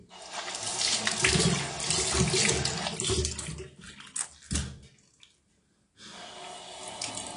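From start to finish the sound carries AAC compression damage, likely from AAC-LC at a low bitrate near 32 kbps. Nothing sounds above 10.6 kHz, and unlike a plain low-pass filter, sustained parts warble and smear as bits are starved.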